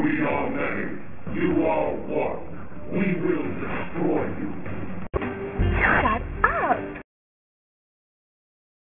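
The audio carries aliasing from start to finish. Its top end stops hard at 3 kHz, which fits a resample down to a 6 kHz rate. No anti-alias filter was applied first. Everything above 3 kHz folded back below it, mirrored around that edge. These folded components land at wrong, unrelated frequencies. They are loud, roughly 10 dB under the wanted sound. High-frequency detail turns gritty and metallic, and the spectrum stays dense right up to the cutoff.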